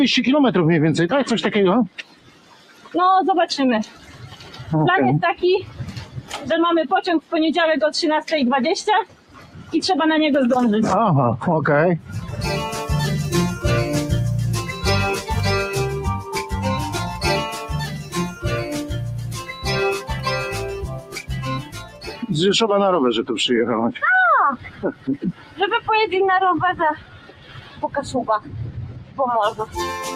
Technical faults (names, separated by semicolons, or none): noise suppressor applied to music or sounds; sound cut by the noise suppressor